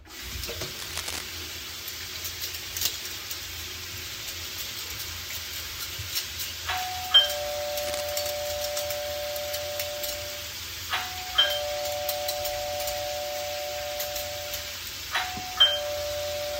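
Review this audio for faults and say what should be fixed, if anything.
Cable scratch noise appears twice. The first burst runs from 0.79 to 1.25 s. It is loud, only about 5 dB below the sound. The second runs from 7.76 to 8.01 s and is quieter, around 10 dB down. Both are dense, uneven rustling laid over the audio. The likely cause is a worn cable or connector being moved, so its contact resistance jumps rapidly. Replace or reseat the cable, and keep it still while recording.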